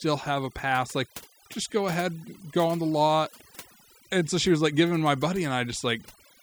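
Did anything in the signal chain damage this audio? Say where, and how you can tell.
Yes. The damage comes from overdone noise removal at the call-processing stage, and it runs through the whole clip. A noise reducer set far too hard is gating individual frequency bands whenever they sit close to its noise estimate. Quiet parts of the speech fall into those bands and vanish with the background noise. You can hear it in the pauses, where the background drops to near silence scattered with twinkling specks.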